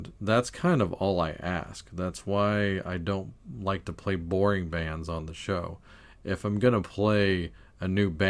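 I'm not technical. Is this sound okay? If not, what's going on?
Yes, it sounds fine.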